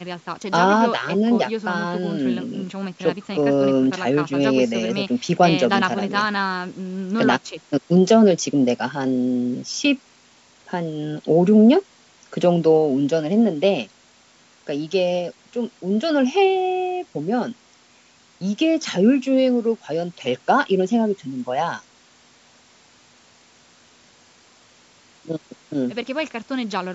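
No technical faults are audible.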